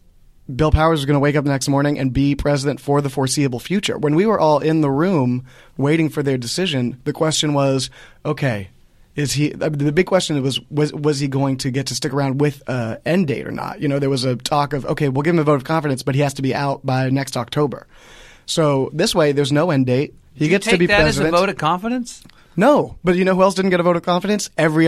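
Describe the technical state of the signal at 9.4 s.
At 9.4 s the signal is intact, with no audible technical fault at that point.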